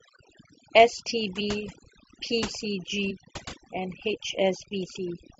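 Throughout this speech clip the background sits in near silence broken by twinkling specks. This is overdone noise removal: the suppression pulls individual frequency bands down hard whenever they come close to its noise estimate, so the quieter parts of the voice are cut away with the noise. The speech also jumps forward twice, at 1.39 to 1.41 s and at 3.1 s. These are compressed frames skipped: roughly 50 ms of audio goes missing at the first point and about 70 ms at the second, which fits about two and then three whole codec frames being lost or rejected by the decoder.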